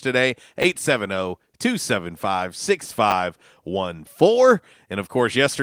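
A short speech recording has two instances of chunks out of order, at 0.62–0.64 s and at 3.1–3.12 s. In each, a 10 ms chunk arrives one chunk late and plays after its successor. No audio is lost, but the swapped order puts three hard joins into a 20 ms span, heard as a brief jumbled flicker. The light Opus voice compression underneath introduces no fault of its own.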